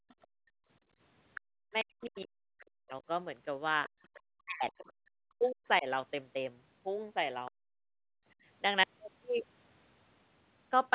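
Speech recorded on a call, with the echo canceller failing in three ways. It gated the background from 0.00 to 1.54 s and again from 3.89 to 4.02 s: while the loudspeaker played, it pulled the microphone down hard, by about 35 dB and then about 31 dB. The room tone falls away in patches totalling roughly 0.7 s in the first stretch, with a brief drop of about 150 ms in the second, and returns once the canceller releases. The canceller also likely left part of the loudspeaker signal in the microphone, so the other side's voice leaks through at 0.09 to 0.27 s, 1.35 to 2.20 s and 3.85 to 4.72 s. The first leak is very faint, around 35 dB under the talker. The second is plainly audible at around 15 dB down, and the third sits in between at around 25 dB down. Where both sides talked at once, the canceller likely could not separate its own talker from the echo and turned everything down, so speech is suppressed in double talk from 1.82 to 2.93 s, 4.44 to 5.86 s and 7.69 to 8.15 s. 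The talker's voice dips by as much as 40 dB or breaks up in pieces. That loss adds up to roughly a second in each of the first two stretches and a short break in the last.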